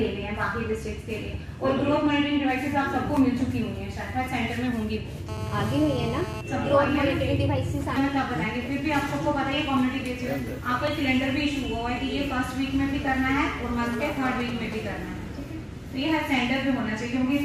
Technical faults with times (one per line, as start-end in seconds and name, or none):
5.29-6.41 GSM phone buzz
13.93-14.74 GSM signalling bursts